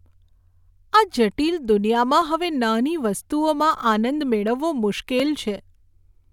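Speech, with a single block of digital silence at 5.20 s: for about 2.5 ms the signal drops straight to zero and returns without any fade. A gap that short reads as one sharp tick, the hard edges on both sides merging into a single click, typical of an output buffer not filled in time.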